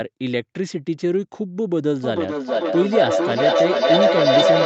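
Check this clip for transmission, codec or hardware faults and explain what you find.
There is one fault, a feedback howl. From 2.03 s to the end of the clip, a tone builds near 700 Hz, with the loop repeating roughly every 0.4 s. It peaks about 6 dB above the speech. Sound is looping from loudspeaker to microphone with net gain. Each pass reinforces that frequency. The band-limited call microphone processing, with nothing above 8 kHz, is not a fault.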